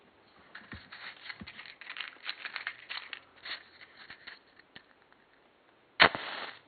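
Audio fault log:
Nothing to log here, since no faults turn up anywhere in this clip of sounds.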